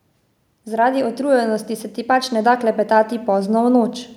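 From 0.64 s to 3.99 s the automatic gain rises about 7 dB, the AGC judging the input too quiet, so speech and background swell up together.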